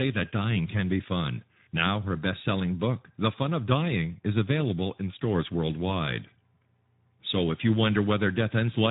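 Speech heard through the Speex codec throughout: hoarse, noisy CELP coding consistent with about 11 kbps, and a spectrogram shows nothing above 3.8 kHz.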